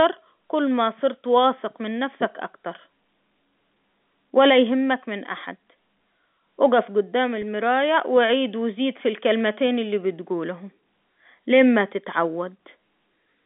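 At 7.42 s there is a brief packet loss with pitch repetition. About 10 ms of the speech signal goes missing, which fits a single lost packet. The receiver fills the hole by repeating the most recent pitch period, so the gap never drops to silence. The result is a tiny held, slightly buzzy blip in the speech, heard through the narrow 150 Hz to 3.5 kHz band of the G.711 A-law telephone coding.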